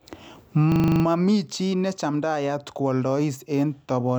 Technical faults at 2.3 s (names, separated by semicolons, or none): none